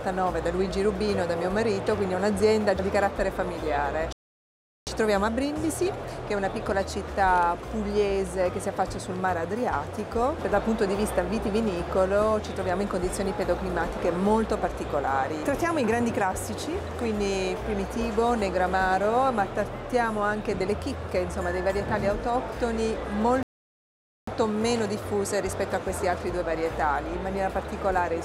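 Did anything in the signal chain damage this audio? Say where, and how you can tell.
Yes. The sound cuts out mid-flow into dead silence twice, from 4.13 to 4.87 s (about 0.74 s) and from 23.43 to 24.27 s (about 0.85 s), then resumes abruptly. These are playback stalls at the playback stage. The gaps are clean silence with no decay or noise, which likely means the player's buffer ran dry or its output thread was blocked, so nothing reached the output until it recovered.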